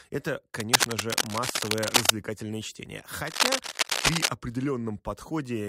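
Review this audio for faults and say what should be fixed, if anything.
Cable scratch noise from 0.6 to 2.1 s and again from 3.26 to 4.28 s: dense, uneven rustling sits a few dB above the speech, likely from a worn cable or connector being moved. Unlike isolated clicks, it is a sustained, irregular crackle. Replace or reseat the cable and keep it still while recording.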